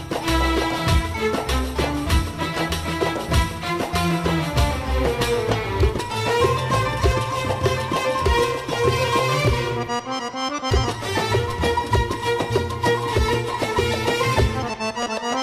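No technical faults are audible.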